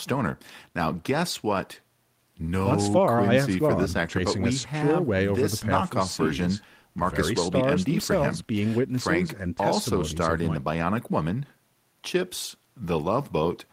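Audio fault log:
No audible faults anywhere in this speech recording.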